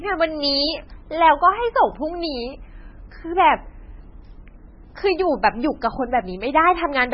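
Throughout the speech there is heavy coding damage, likely MP3 compression at a very low bitrate that fits around 16 kbps. Nothing remains above 5.6 kHz, and weak spectral detail switches on and off between frames, giving a watery, swirling texture and smeared attacks.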